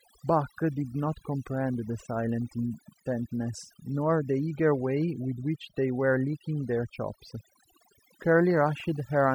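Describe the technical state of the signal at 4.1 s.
At 4.1 s you're hearing overdone noise removal, and it runs the whole clip. The reducer was pushed too hard, so bands close to its noise estimate get pulled right down, taking quiet speech detail with them. The background drops and breaks up into twinkly specks.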